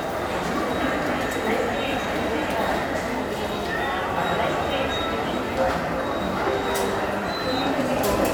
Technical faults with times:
none

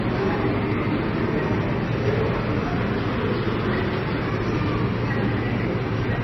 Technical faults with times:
0.00-6.23 MP3 compression
0.00-6.23 sample clock jitter

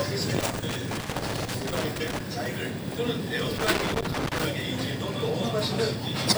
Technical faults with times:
0.40-2.20 loose connector crackle
3.58-4.44 loose connector crackle

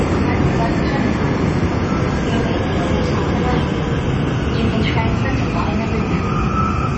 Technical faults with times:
0.00-6.97 MP3 compression
2.54-4.98 drift correction step

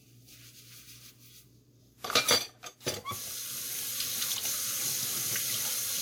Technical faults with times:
0.00-6.01 generation loss

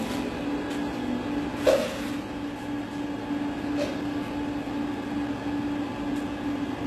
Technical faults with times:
0.00-6.86 HE-AAC compression

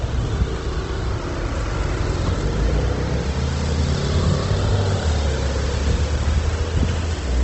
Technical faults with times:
0.00-7.43 Opus compression

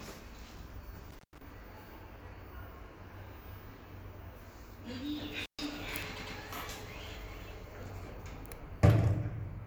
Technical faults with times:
1.10-1.42 intermittent contact
5.39-5.65 intermittent contact
6.15-6.36 repeated frames

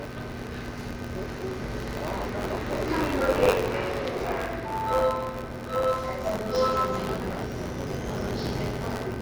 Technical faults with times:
0.00-9.21 buffer tearing

